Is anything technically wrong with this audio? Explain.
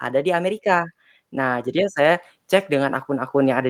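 Yes. From about 0.05 s until the clip ends, the speech shows automatic gain rising. The gain control has judged the input too quiet and is raising its gain gradually, so the level climbs steadily across the whole clip rather than holding steady. Because the gain acts on the whole signal, the voice and the background noise swell together, and the noise floor climbs in step with the speech instead of staying put.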